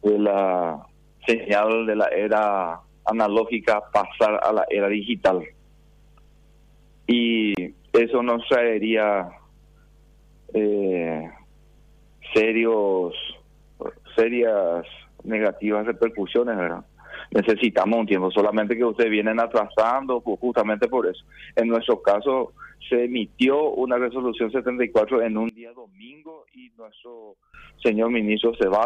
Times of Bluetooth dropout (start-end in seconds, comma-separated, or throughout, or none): 7.55-7.57